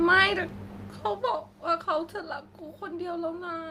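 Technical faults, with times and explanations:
Listening to this speech clip, nothing stood out.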